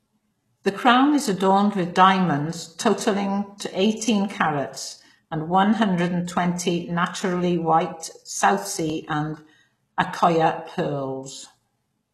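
Throughout the speech, s sounds are gritty and lispy, with a metallic treble that plainly points to HE-AAC compression, likely at around 16 kbps. A spectrogram shows copied, misaligned upper bands above the crossover, with nothing above 12.3 kHz.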